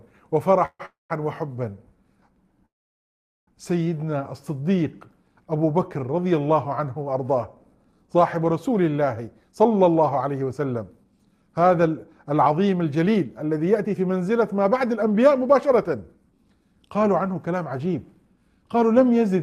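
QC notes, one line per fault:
0.65–0.81 s, 0.85–1.12 s and 2.66–3.49 s, call audio freeze: the sound stalls and its last moment trails off as a fading buzz into silence, briefly in the first two and for about 0.8 s in the third. Then it picks up exactly where it stopped, so nothing is lost, just gaps of 141, 242 and 816 ms pushed in. Likely delayed packets draining the jitter buffer.
3.98–4.25 s, jitter buffer slow-down: the audio drags to 85% speed at unchanged pitch, with sounds drawn out, as the receiver repeats tiny pitch-period slices to rebuild its reserve, adding 47 ms in total.
9.27–18.82 s, jitter buffer speed-up: a long stretch runs at 109% speed, pitch unchanged, so it feels a bit hurried. The receiver is trimming short pitch-period pieces over and over to shed excess buffered delay, removing around a second in all.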